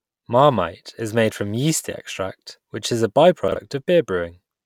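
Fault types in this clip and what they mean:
Chunks out of order: one 40 ms chunk of the speech arrived or was written a single slot late, so it plays after the chunk that should have followed it, swapping their places between 3.48 and 3.56 s. No audio is lost, but the reordering creates three hard joins where unrelated waveform edges meet. The result is a brief jumbled moment in the speech.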